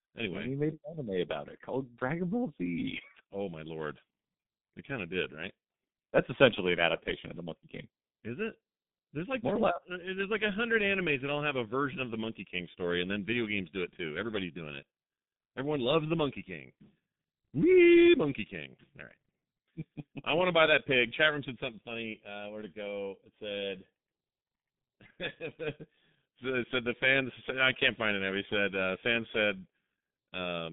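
G.723.1 codec damage runs through the whole speech clip. Nothing passes above 3.8 kHz. The slow, coarse voice model, which fits a 6.3 kbit/s stream, leaves the speech muffled and hoarse, with smeared consonants.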